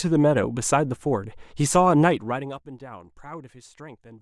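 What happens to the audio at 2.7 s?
At 2.7 s the speech plays through intact, with any level movement there staying smooth rather than jumping or cutting out.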